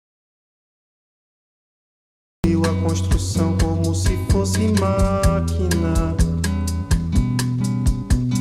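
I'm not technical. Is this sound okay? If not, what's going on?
No. For the first 2.44 seconds there is nothing at all, not even the faint background hiss you'd expect from a room, and then the sound suddenly starts partway through. That dead stretch is an audio dropout to silence. Most likely the input was cut off at the very start, perhaps a loose connection or a mute switched on, while the recording kept running and saved pure silence. Whatever happened in those seconds is lost.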